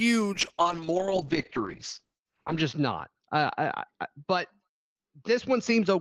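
From 0.34 s to the end, the speech goes through a call bitrate drop. The encoder lost most of its bit budget, consistent with a fall from around 32 kbps to about 7 kbps. Audio above 8 kHz disappears, leaving the speech muffled, while the coarser coding adds a rough, watery texture that is worst for about 2.3 s. The sound stays continuous, with no gaps or repeats, which separates it from packet loss.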